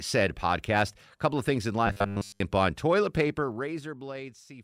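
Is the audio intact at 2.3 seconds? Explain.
No. From 1.87 to 2.40 s, a rigid, metallic 100 Hz buzz marks robotic sound from repeated short buffers, likely caused by a 10 ms segment looping while most new audio is skipped.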